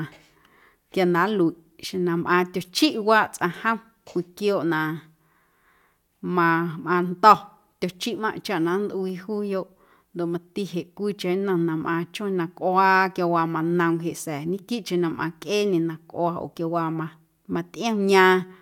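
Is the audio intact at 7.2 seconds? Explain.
Yes, the speech at 7.2 seconds plays through intact, with no fault at that moment.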